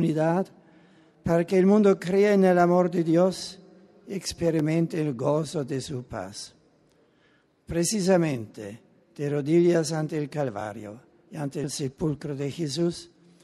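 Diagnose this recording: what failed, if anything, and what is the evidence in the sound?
Overlapping chunks, at the buffer or chunk-processing stage. There are short stutters at 4.59 s and 10.61 s, 6.0 s apart. At each join, about 13 ms of sound plays twice, because every new chunk begins slightly before the previous one ended.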